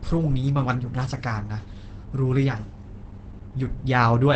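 A speech clip marred throughout by what is likely Opus compression at a very low rate, near 12 kbps: nothing remains above 8.5 kHz, and the speech-mode coding leaves it muffled and hoarse. Unlike MP3, it has few swirly, watery holes in the spectrum.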